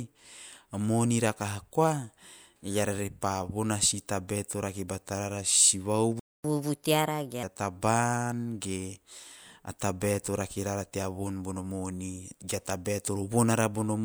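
At 6.20 s the speech cuts out into silence for about 0.25 s, until 6.44 s. This is a playback stall, most likely the player's buffer running dry or its output thread being blocked, so nothing reached the output until it recovered. From 6.44 s to 7.43 s the player does a catch-up at higher speed, resampling the backlog at 1.25 times normal rate. The speech sounds hurried and raised in pitch by roughly four semitones, then drops back to normal speed and pitch at 7.43 s.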